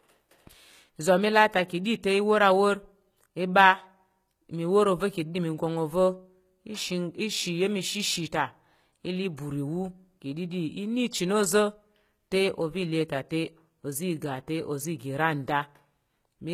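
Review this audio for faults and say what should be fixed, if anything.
Throughout the speech, sibilants sound gritty and metallic, and the top end stops near 14.9 kHz. This is likely HE-AAC compression at a very low rate, around 20 kbps: the upper band is copied from lower frequencies instead of coded, so its harmonics don't match. Encoding at a higher bitrate with plain AAC would avoid this.

At 9.37 s a brief hiss of about 16 ms runs just ahead of a sharp attack, softening its edge. This is pre-echo: the codec spreads quantisation noise across its whole transform block, so the noise fills the quiet gap before the onset. Allowing more bitrate, or an encoder that switches to short blocks on transients, would prevent it.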